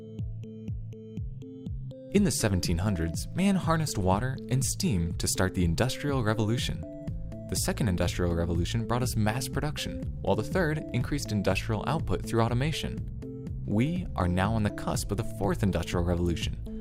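Nothing goes wrong anywhere in this recording; there's no technical fault to point to at any moment.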